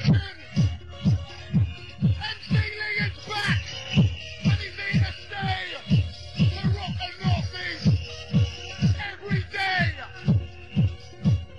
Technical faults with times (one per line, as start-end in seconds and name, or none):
none